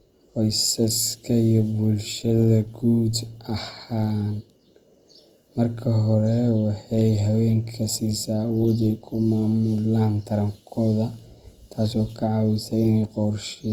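Throughout, the speech has likely been squeezed by Opus compression in its music mode at a low rate, which fits 24 kbps. Starved bands are filled with folded or noisy content, so tonal parts sound plainly rough and grainy, though the bandwidth still reaches 20.2 kHz.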